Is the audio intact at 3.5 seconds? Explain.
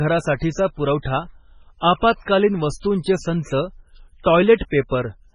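No. At 3.5 seconds, as throughout the speech, the sound is watery and swirly, with metallic chirps on s sounds, smeared onsets, and nothing above 10.5 kHz. The likely cause is heavy MP3 compression. Starved of bits, the encoder chops off the treble at a fixed point and drops weak frequency lines that flicker on and off between frames. Damage this severe points to a very low bitrate, around 16 kbps.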